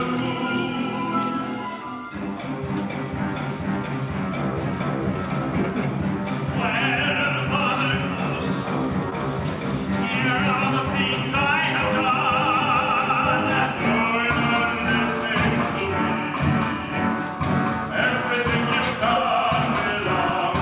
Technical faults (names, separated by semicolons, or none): short concealed packet loss